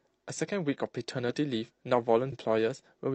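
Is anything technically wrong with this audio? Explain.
Yes. From 2.28 to 2.33 s the speech jumps abruptly forward with a small blip, as if a stretch of the programme is missing. This is likely a stream segment skipped: one chunk of the segmented stream failed to load, and playback resumed from the following segment.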